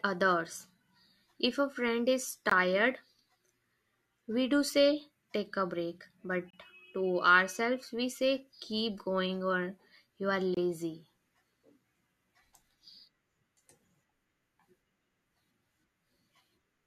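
Hard-edged silent holes at 2.50, 6.50 and 10.54 s, about 20 to 30 ms each, mark a gap between stream segments: the 4-second chunks' timestamps don't line up, so the player pads with silence.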